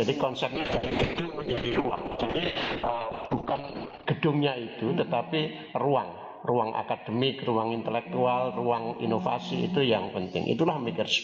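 From 0.57 s to the end at 11.23 s there is a call bitrate drop: the encoder's rate falls from 32 kbps to 6 kbps, holding the floor for 3.5 s. Coarser coding turns the sound rough and watery, and bandwidth narrows from 20 kHz to 6 kHz, muffling the top end.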